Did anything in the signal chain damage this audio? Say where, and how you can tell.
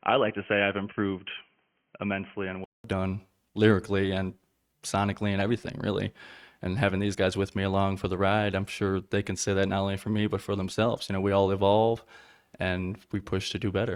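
Yes: the input likely switched from a poorer device at capture. Until 2.84 s the sound is boxy and stops at 3.2 kHz; a 0.2 s gap precedes "done lyrically and sonically".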